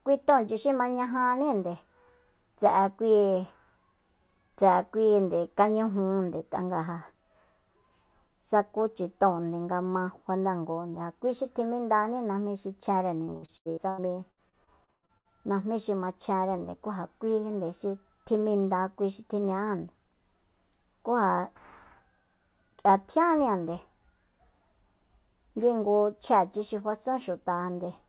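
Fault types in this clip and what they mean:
Repeated packet loss (robotic sound): between 13.25 and 15.28 s, after "xi chjenre", packets kept dropping out, and each hole was patched by extending the previous sound. The result is choppy speech with pieces missing, with about a dozen gaps (the longest 121 ms) covering roughly a third of that stretch.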